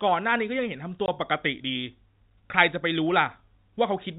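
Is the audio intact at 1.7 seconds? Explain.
Yes, the audio is intact at 1.7 seconds: nothing breaks or disturbs the speech there, and the only thing audible is the narrow, telephone-band character of G.711 coding, which is working as it should.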